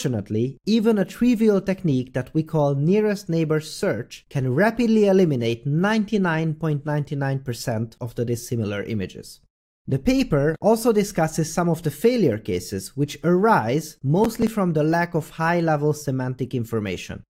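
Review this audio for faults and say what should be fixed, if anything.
From 14.24 to 14.47 s there is processor overload crackle: a gritty burst of tearing where the processor missed roughly seven deadlines on very short buffers, a millisecond or two each, and skipped them, leaving hard-edged gaps. Unlike a single dropout, it is a rapid cluster that stops when the load passes. Prevent it by enlarging the buffer or reducing processing load during capture.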